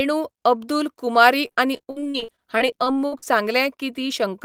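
From 1.47 to 3.28 s, repeated packet loss leaves frequent gaps up to 60 ms, each concealed by extending preceding sound, producing choppy, robotic speech.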